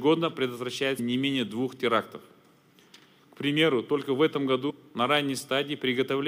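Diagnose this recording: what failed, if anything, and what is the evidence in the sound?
Compressed frames skipped, at the codec or storage stage. The audio jumps ahead at 0.98 s and 4.69 s, losing about 100 ms and 150 ms. The losses fit a few 26.1 ms frames.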